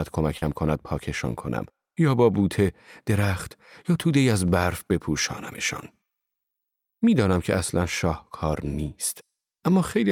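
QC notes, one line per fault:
0.37–0.44 s, short concealed packet loss: about 40 ms of speech never arrived, so the decoder stretched the preceding sound over the gap, leaving a brief smear.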